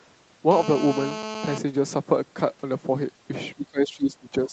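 From 0.51 to 1.58 s, a nearby 2G handset in an active call transmits its radio bursts about 217 times a second, and the audio circuitry rectifies them. The result is GSM phone buzz: a steady, hard, raspy 217 Hz tone dense with harmonics, sitting only about 9 dB below the speech.

From 3.55 s to the end of the clip, the echo canceller likely mistook the talker for loudspeaker echo while both sides spoke, and attenuated everything. This speech suppression in double talk makes the voice sink by as much as roughly 20 dB, thinning and breaking up, within a band that stops at 8 kHz.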